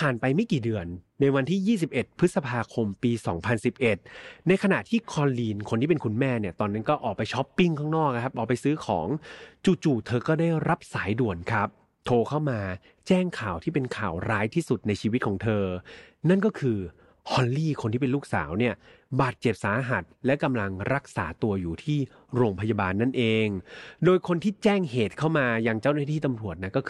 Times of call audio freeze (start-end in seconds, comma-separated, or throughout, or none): none